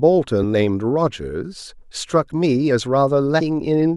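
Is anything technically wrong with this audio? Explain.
Yes. The speech has two short glitches caused by damaged data in a compressed stream. They occur at about 0.42 s and 3.39 s. Each lasts under 20 ms. At those points some bytes of the encoded stream are corrupt. The decoder misreads or rejects the affected frames, loses sync, and hunts for the next valid frame header. Each event is heard as a sharp blip or chirp that cuts briefly into the speech.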